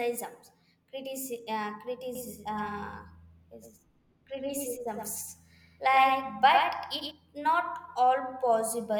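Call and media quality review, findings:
Doubled audio track, 2.15 s to 7.11 s. The speech is layered with a second full-band copy trailing roughly a tenth of a second behind, about 5 dB down. It has no decay and no room colour, and it cuts in and out abruptly at both ends. Likely cause is a slower second capture path or an edit leaving two copies out of step. Check routing for a duplicate feed.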